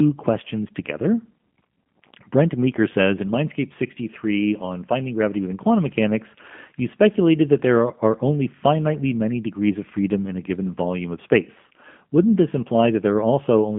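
Throughout, the speech carries G.729 codec damage: rebuilt from filter, pitch and pulse parameters, it sounds rough and synthetic, not merely band-limited to 150 Hz–3.5 kHz, fitting 8 kbit/s.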